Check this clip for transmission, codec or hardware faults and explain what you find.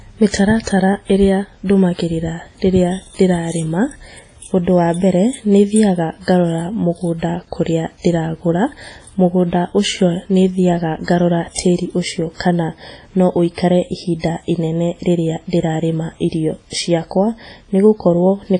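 Two codec faults are audible in this speech clip.

Throughout, the speech sounds washy and ringing, with hiss that rises and falls with the signal and nothing above 10.1 kHz. This is likely heavy WMA compression at a low bitrate, around 24 kbps. Long transform blocks smear quantisation noise over tens of milliseconds and zero weak spectral lines. Unlike a plain low-pass filter, the hiss pumps with the signal.

Pre-echo occurs from 0.29 to 0.34 s, spreading about 49 ms, and from 0.63 to 0.67 s, about 41 ms. A short hiss arrives before each sharp onset, and the attack sounds softened. Each block's noise is sized for its loud attack but spreads back into the quiet before it. Unlike a true echo or reverb, the smear comes before the attack rather than after it.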